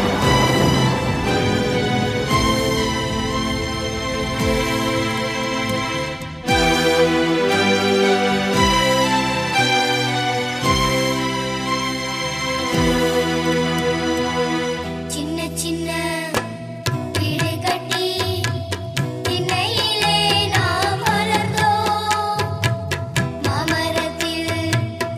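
No technical faults can be heard anywhere in the recording. Nothing in the sound signals a problem with the way the audio was captured, processed or delivered.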